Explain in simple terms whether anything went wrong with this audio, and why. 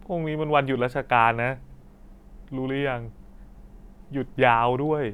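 At 1.70 and 3.80 seconds the speech stutters briefly, as a tenth of a second plays twice. These are overlapping chunks: the audio was handled in two-second pieces, and each new piece began slightly before the previous one finished, repeating that sliver.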